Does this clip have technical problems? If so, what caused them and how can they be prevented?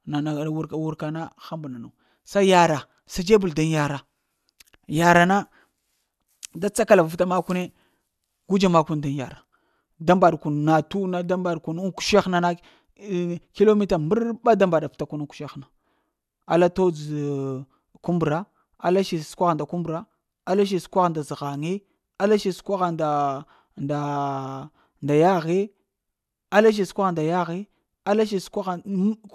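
No, the speech recording shows no technical fault, so nothing needs preventing.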